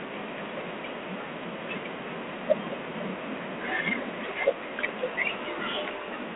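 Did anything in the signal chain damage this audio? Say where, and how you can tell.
Yes, the damage is at the codec stage, and it runs through the whole clip: this is G.726 ADPCM coding. The speech sits in a telephone band of roughly 300 Hz to 3.4 kHz, with nothing above 3.8 kHz, and it carries a harsh, rasping hiss that rises and falls with the speech level. That's quantisation noise from coding each sample as a few bits of difference from an adaptive prediction, and its coarseness fits the 24 kbit/s mode.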